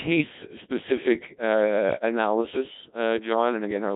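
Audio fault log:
Throughout: Codec 2 vocoder. The speech is rebuilt from sine waves driven only by pitch, voicing, energy and a coarse envelope, so it sounds heavily robotic and buzzy, consistent with about 1.3 kbit/s. A spectrogram shows rigid harmonics and smeared detail. The waveform's original shape is lost.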